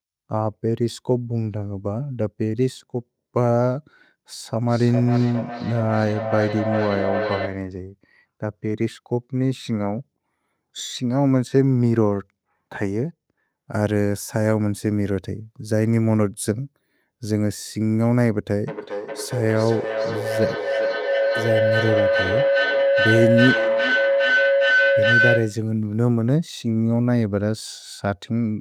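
Feedback howl rises from 4.66 to 7.77 s, peaking about 5 dB below the speech, then returns more strongly from 18.68 to 25.72 s, reaching about 1 dB above it. A microphone-to-loudspeaker loop gains level on each pass, so the sound narrows to a tone near 500 Hz that pulses roughly every 400 ms. A spectrogram shows a bright horizontal band near 500 Hz, striped at that spacing. The waveform swells in regular surges.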